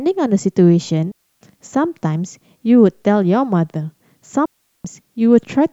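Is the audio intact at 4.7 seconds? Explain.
No. At 4.7 seconds the speech falls inside a digital wireless dropout running from about 4.46 to 4.85 s, roughly 390 ms of near silence. The radio link lost too much data, so the receiver muted its output with a very quick fade rather than pass corrupted audio. It sounds like a clean hole with no noise burst on either side. On a waveform it shows as a flat gap, and on a spectrogram as an empty vertical band.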